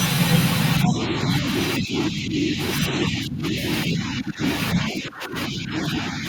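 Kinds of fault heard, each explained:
Speech suppressed in double talk: the echo canceller likely could not separate the talker from loudspeaker echo and turned both down, so speech keeps dipping by about 10 to 15 dB.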